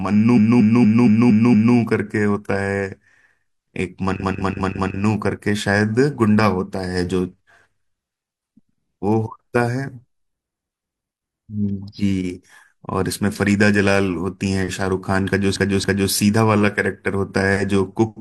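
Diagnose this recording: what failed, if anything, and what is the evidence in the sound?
Repeated frames at the codec or storage stage: short runs of compressed speech are decoded again, giving stutters at 0.33–1.72 s (a 232 ms block replayed six extra times), 4.18–4.93 s (186 ms, four times) and 15.51–16.07 s (279 ms, twice), lengthening the audio accordingly.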